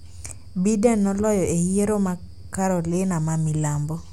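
Nothing in the recording stood out as a technical problem on listening.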